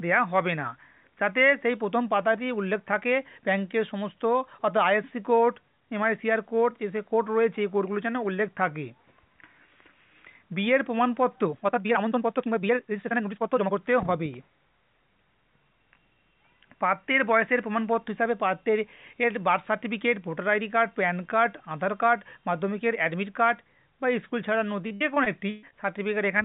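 From 11.42 s to 13.78 s the pace jumps to roughly 1.69 times normal speed while the pitch holds steady, the signature of a time-stretched section. To shorten the passage without raising the pitch, the stretching process discards short slices of the waveform and splices the remainder back together. Here the result sounds rushed. The likely cause is software fitting this segment into a shorter slot.

Between 24.87 s and 25.74 s, repeated packet loss produces a robotic sound. Six separate holes appear in under a second, the longest about 124 ms. Each is patched by extending the preceding sound, covering roughly 275 ms in total, while about 280 ms of material is simply missing. That leaves close to a third of the span synthesized, giving a choppy texture with pieces missing. Throughout, the audio stops at 4 kHz, which fits a 64 kbps G.711 A-law call path.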